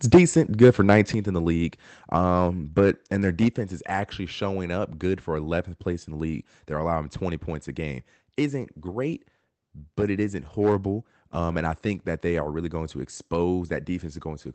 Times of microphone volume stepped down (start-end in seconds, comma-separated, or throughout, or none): 0.15, 1.14, 3.48